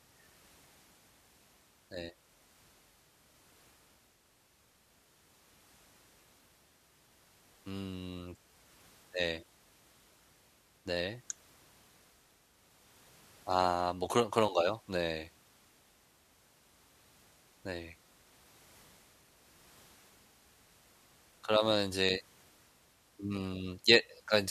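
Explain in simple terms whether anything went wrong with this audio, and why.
Nothing went wrong here: listening across the speech, there are no dropouts, clicks, glitches or other defects to point to.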